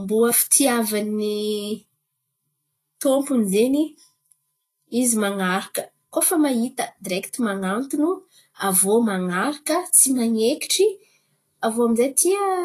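It's a speech recording, and the whole thing carries audible coding damage, likely from Vorbis compression at a low setting. The top end stops dead around 14.2 kHz, and the treble below that has gone hissy and grainy, because the coarsely quantised high-frequency detail has turned into noise of roughly the same energy. Voiced sounds come across roughened and consonant onsets are smeared, which fits a bitrate somewhere near 30 kbps.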